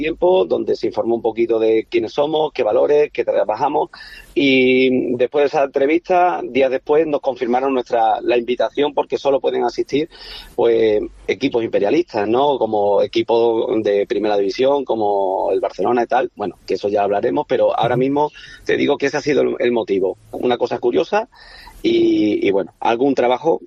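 No technical faults are audible anywhere in the recording.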